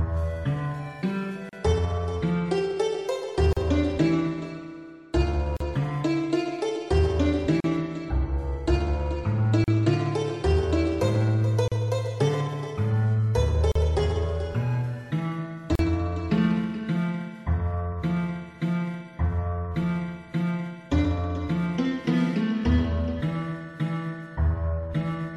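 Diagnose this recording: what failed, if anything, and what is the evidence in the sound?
At the codec stage, separately encoded pieces were joined without trimming encoder delay and end padding: a gap at a join of encoded pieces. Silences of about 37 to 38 ms open at 1.49, 3.53, 5.57, 7.60, 9.64, 11.68, 13.72 and 15.75 s, roughly every 2 s, with smeared edges before the sound resumes.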